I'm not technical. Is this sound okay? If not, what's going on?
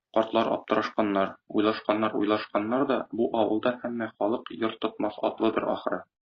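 No. From 1.33 s to the end, an adaptive stream at a lower bitrate takes over. The connection slowed, so the speech suddenly turns grainy, without any gap.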